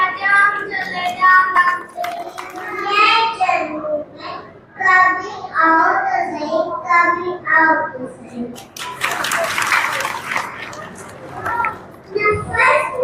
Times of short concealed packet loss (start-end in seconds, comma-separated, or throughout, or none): none